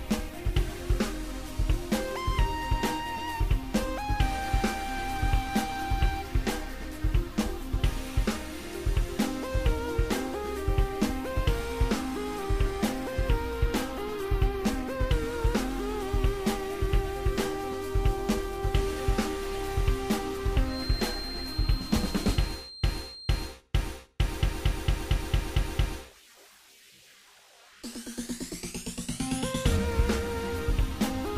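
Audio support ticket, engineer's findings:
Feedback whistle, 20.62 to 23.59 s. Thin steady tone at 4.2 kHz, about 15 dB under the programme, swelling and fading slowly in level. Likely cause: speaker-to-mic loop gain sitting right at the feedback threshold, sustaining one frequency without runaway. Spectrogram: single narrow horizontal line at 4.2 kHz across that span.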